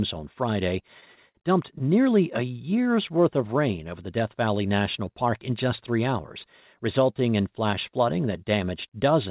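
This speech clip stutters between 0.88 and 1.38 s: five repeated stalls where the jitter buffer ran dry, with the last sound stretched to fill about 106 ms, the longest gap 59 ms. From 2.70 to 3.22 s there's a jitter buffer slow-down. Pitch periods get repeated to rebuild the reserve, adding about 52 ms, so that stretch plays at roughly 91% speed with the same pitch. The narrow band with nothing above 4 kHz fits a G.711 call path.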